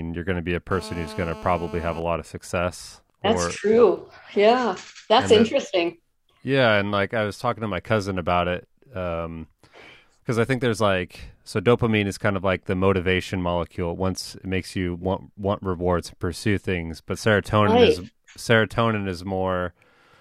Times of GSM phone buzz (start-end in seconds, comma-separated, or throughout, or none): 0.71-1.98